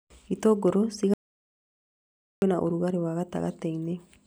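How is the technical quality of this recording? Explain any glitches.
The recording has one clear glitch. From 1.14 to 2.42 s there is an audio dropout to silence: the input signal was likely interrupted while recording continued and wrote silence. The speech cuts off abruptly, leaving about 1.28 s of dead silence with no room tone, and resumes mid-flow.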